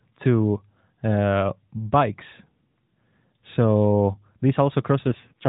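At 5.08 s the speech turns rougher and more synthetic, and stays that way to 5.48 s. This is an AMR rate drop. The mobile codec switches to a much lower bitrate, which fits a fall from 12.2 to 4.75 kbps. Fewer bits go to the voice and more go to error protection. The narrowband telephone band does not change, and there is no gap. The voice simply turns buzzier until the clip ends.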